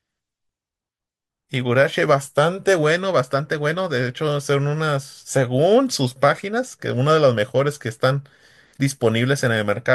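Nothing stood out on listening to this speech recording.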